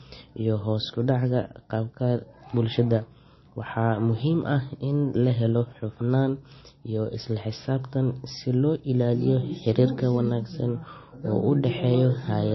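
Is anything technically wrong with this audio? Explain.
Yes, MP3 compression runs throughout: nothing above 5.8 kHz, and weak frequency lines flicker between frames, giving watery, swirly speech with metallic chirps on s sounds, likely from a very low bitrate.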